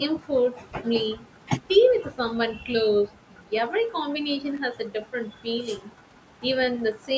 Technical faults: electrical switching spike

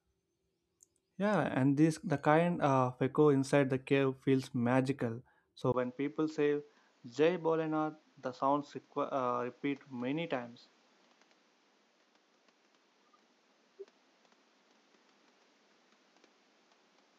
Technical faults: input switched to a poorer device

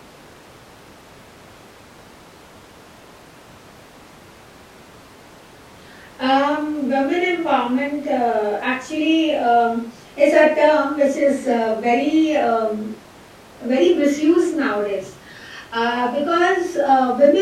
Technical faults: none

